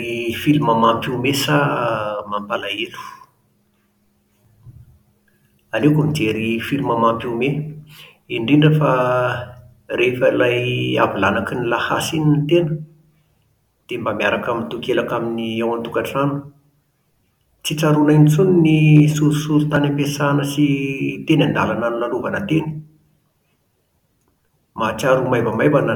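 At 18.96 to 19.00 s there's a short burst of hard clipping: the speech peaks ran about 2 dB past what the chain could pass, flattening them into a brief crackle.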